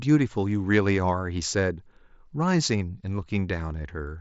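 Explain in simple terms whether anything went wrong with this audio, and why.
Nothing went wrong with this audio; the speech simply carries the ordinary sound of a Bluetooth headset link.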